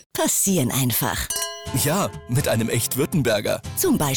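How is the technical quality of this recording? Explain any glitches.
There is one glitch. From 0.53 to 1.66 s, noise and distortion appear, likely a stuck bit. One data bit holds fixed, shifting values by a step around -50 dBFS.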